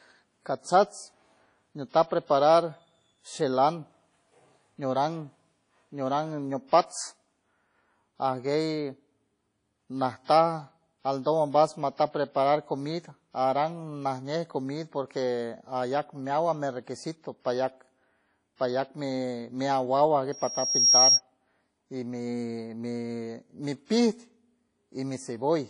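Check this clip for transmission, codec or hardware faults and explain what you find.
Three kinds of fault are audible: codec damage throughout, two pre-echoes, and a feedback squeal.

WMA compression runs through the whole speech clip. The damage is plainly audible. Nothing is present above 10.1 kHz. A transform codec at low bitrate zeroes weak spectral lines and spreads its quantisation noise across long blocks. The result is ringing and washy, with hiss that breathes with the signal. The likely cause is WMA encoding, and the sound fits a bitrate near 32 kbps.

Pre-echo occurs twice, from 6.67 to 6.72 s and from 10.25 to 10.28 s. The spreads are 50 ms and 39 ms. Each time, a sharp attack sits late in a codec block. The noise sized for that loud attack is spread evenly across the block, so it also fills the quiet moment before it. You hear a short hiss just ahead of the onset, and the attack sounds smeared.

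A loudspeaker feedback squeal runs from 20.32 to 21.21 s. It is a single tone at 5.6 kHz. It builds over about half a second and reaches about 10 dB above the speech. A microphone was picking up the loudspeaker it fed. At this frequency the loop gain exceeded one. The tone then fed on itself and grew until the loop was broken or the level was limited.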